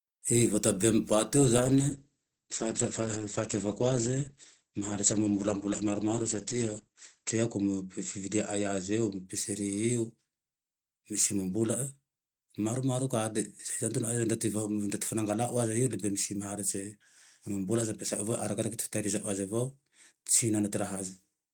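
From 1.58 s to 9.31 s the speech turns muffled and rough, losing its top end, with the worst stretch lasting about 5.7 s. This is a call bitrate drop: the encoder's rate fell, which fits roughly 32 to 9 kbps, narrowing bandwidth from 20 kHz to 8 kHz.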